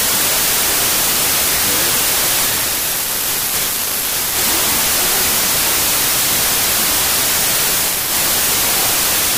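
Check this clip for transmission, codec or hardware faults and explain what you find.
One fault runs through the whole clip: a wrong sample width. Audio stored as 32-bit integers is read back as 16-bit. Each stored sample splits into two values. Only one keeps the signal's top bits. The other is near-random. The speech sits buried in loud noise, playing at half speed and an octave low.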